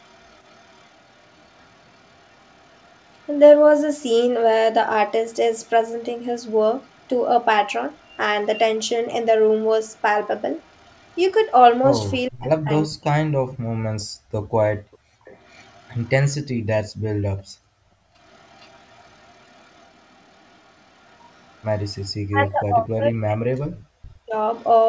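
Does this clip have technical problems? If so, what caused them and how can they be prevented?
Yes. Echo leak runs from 0.0 to 11.2 s, 14.0 to 22.1 s and 24.55 to 24.68 s: a faint copy about 35 dB down, delayed 435 to 479 ms, likely from a loudspeaker echo canceller that did not fully converge. Using a headset or retuning the canceller's adaptive filter and residual suppression would prevent it.

Speech suppressed in double talk occurs at 12.29 to 13.31 s and 22.27 to 24.35 s, where the talker drops by roughly 40 dB in pieces, likely because the canceller attenuated both sides during overlap. Better double-talk detection, or full-duplex headsets, would prevent it.

Background gated by the echo canceller appears at 14.08 to 15.25 s and 17.45 to 18.14 s, where room sound falls about 34 and 31 dB, respectively, while the far end plays. Gentler suppression with comfort noise would prevent it.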